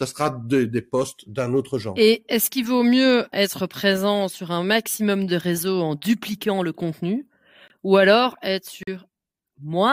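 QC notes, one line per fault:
7.68–7.72 s, corrupt frame muted: just after "en dupliquant le contenu", the speech drops abruptly into silence for about 36 ms, a length that fits two damaged compressed frames. The decoder rejected them and the player substituted nothing. The hole is flat silence with a hard edge rather than a smeared or repeated fill, and "ou alors être" arrives on time, so no audio is lost from the timeline.
8.82–8.88 s, corrupt frame muted: after "contenu ou alors être", a longer silent hole of about 68 ms cuts in, consistent with three rejected frames. Unlike a clock dropout or buffer underrun, the timing does not slip. Unlike concealment, the gap is empty instead of being padded with synthesized sound.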